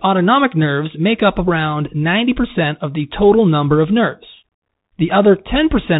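Speech heard through a Bluetooth CVSD headset codec from start to finish, with plainly audible damage. Nothing passes above 4 kHz, and a fine granular hiss sits under the speech. The codec sends only one up-or-down bit per sample and adapts its step size, so loud, fast-rising sounds outrun the step and distort, and s sounds turn scratchy. That grit and hiss separate it from a plain 4 kHz low-pass. The character fits the 64 kbps CVSD stream of a narrowband headset link.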